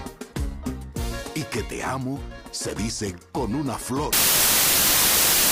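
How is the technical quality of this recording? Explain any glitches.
The recording has one serious glitch near the end. From 4.13 s to the end there is a wrong sample width: packed 24-bit data are read as 16-bit, so bytes from neighbouring samples get mixed. The sound becomes loud noise with the original buried inside, playing at two-thirds speed and lower pitch.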